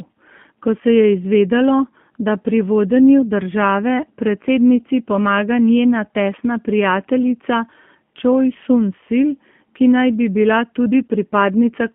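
The whole clip has been through a G.729 codec: the line band is cut to 150 Hz–3.4 kHz, and the speech sounds plainly rough and synthetic, which fits an 8 kbit/s stream.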